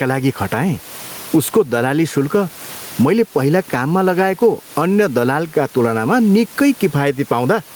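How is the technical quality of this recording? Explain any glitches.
Quality is compromised by gain pumping throughout. The gain swings around 15 dB, ducking under each loud syllable, likely from excessive gain driving a fast limiter. The speech sounds squashed.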